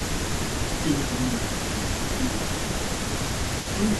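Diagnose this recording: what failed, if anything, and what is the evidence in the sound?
A faint second copy of the speech trails the original by 276 ms for the whole clip, sitting roughly 10 dB below the direct voice and smearing each phrase. This is an echo leak in the call processing stage. The far end was likely playing the call through a loudspeaker, and its echo canceller let part of the microphone pickup through, sending the delayed copy back down the line.

The voice also sinks in level at four points: 0.82 to 1.18 s, 1.38 to 2.21 s, 2.41 to 2.72 s, and briefly at 3.76 to 3.8 s. The first two dips reach around 10 dB and the later two are shallower, nearer 5 dB. This is speech suppressed in double talk, again in call processing. The echo canceller likely could not separate the talker from the returning echo while both were present, so it attenuated the speech along with it.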